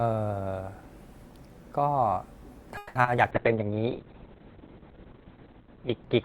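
Around 2.77 s to 3.20 s you get a burst of repeated packet loss, and it turns robotic and choppy. There are four holes in that stretch, the longest about 180 ms. The receiver papers over the holes by stretching out the last bit of sound, roughly 210 ms of filler in all, but about 60 ms just drops out. Nearly half that span is patched-in sound, so it comes across stuttery.

Right after, at 3.32 s, there's a call bitrate drop that lasts to the end of the clip. The encoder gets squeezed from 48 kbps down to 6 kbps and sits at the bottom for about 2.2 s. At that rate it codes everything much more coarsely, and the audio bandwidth collapses from 20 kHz to 4 kHz. The speech goes dull and muffled, with a rough, watery texture to it.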